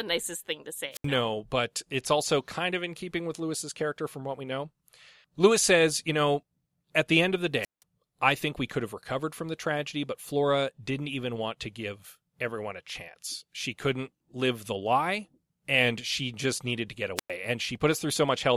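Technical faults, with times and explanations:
0.92–1.07 s, 7.61–7.83 s, 17.16–17.30 s: wireless microphone squelch dropouts, after "nicest thing to", "the end of the" and "just needed to get". Each time the speech thins into a swell of hiss as the FM radio link fades, then the receiver's squelch mutes the output for about 76, 171 and 104 ms before the speech returns. That rising static before each gap distinguishes these from a clean digital packet dropout.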